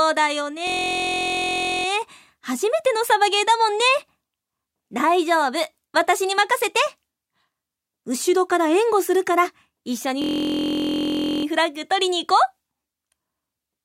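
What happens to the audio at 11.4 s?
At 11.4 s the audio is near the end of a system hang loop (10.22–11.45 s): one 23.22 ms slice, which fits a 1024-sample buffer, repeats exactly as a steady 43.1 Hz buzz rather than dropping to silence.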